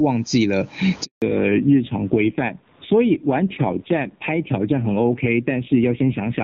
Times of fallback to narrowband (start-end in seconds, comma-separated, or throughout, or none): 1.22-6.44